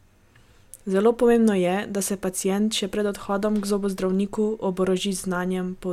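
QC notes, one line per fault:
No technical faults are audible in the speech at any point, and the signal path shows nothing needing attention.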